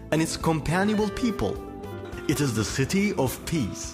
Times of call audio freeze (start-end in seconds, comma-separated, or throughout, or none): none